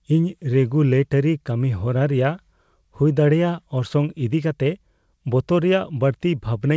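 No technical faults can be heard in this speech clip. It has passed through a WebRTC call path working as intended, with a G.722-style codec that leaves nothing above 8 kHz, so the top of the spectrum is missing and the usual coding noise is present.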